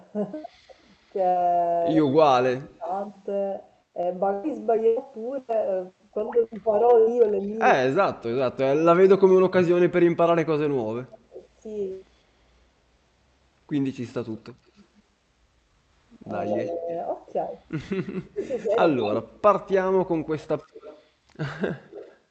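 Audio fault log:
2.0–2.89 s: speech suppressed in double talk. The talker's level collapses by roughly 35 dB in broken pieces totalling about 0.7 s, so stretches nearly vanish. This likely happened because the far side was talking at the same time. The echo canceller could not tell this voice from its own loudspeaker pickup, so it attenuated everything.
16.5–22.18 s: echo leak. A copy of the speech trails it by 182 ms at roughly 15 dB below the main signal, running to nearly the end. This likely happened because a loudspeaker endpoint's echo canceller left part of the returned audio uncancelled and sent it back into the call.
16.68–19.3 s: speech suppressed in double talk. Shallower dips of roughly 15 dB come and go, about half a second in total, overlapping the echo. The likely cause is simultaneous talk triggering suppression again.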